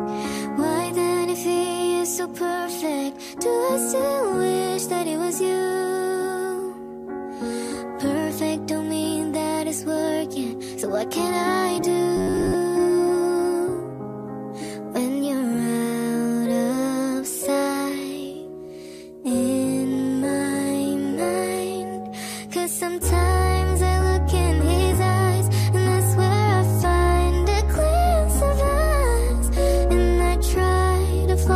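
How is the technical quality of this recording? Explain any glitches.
One glitch stands out: robotic sound from repeated short buffers between 12.17 and 12.54 s. For that stretch the sound becomes a rigid, metallic buzz at 93.8 Hz. The likely cause is a short buffer, about 10.7 ms, replayed again and again while most of the real audio goes missing. Unlike steady distortion, it imposes one fixed pitch.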